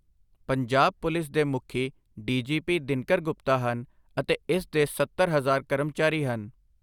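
Speech recording with no technical faults audible.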